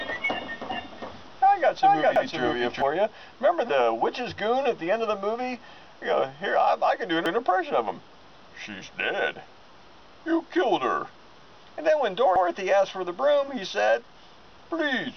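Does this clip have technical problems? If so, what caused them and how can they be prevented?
Yes. A doubled audio track runs from the start to 2.82 s. An equally loud copy trails by roughly 400 ms, likely from a second, slower capture path. Record the source through one path only.

Overlapping chunks cause stutters at 2.16, 7.26 and 12.36 s. Each 5 s chunk starts 100 ms early, so that piece plays twice. Make each chunk begin exactly where the previous one ended.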